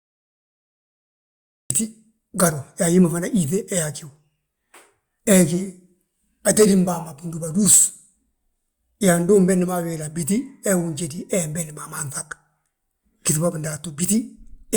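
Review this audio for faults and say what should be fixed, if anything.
There's a cut-off start: digital silence until 1.70 s, then the speech drops in mid-sound with no attack, because capture began late. Start recording a second or two before anyone speaks.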